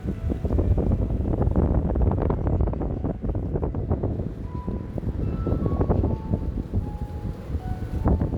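At 5.15 s, a handful of samples, amounting to only a fraction of a millisecond, are missing from the stream. This is most likely a case of dropped samples. Because the waveform resumes at a later value instead of continuing smoothly, it takes an abrupt step at that instant. The gap is far too brief to remove any audible sound. What comes through is a single sharp click, which shows up in a spectrogram as a thin vertical line spanning the frequency range.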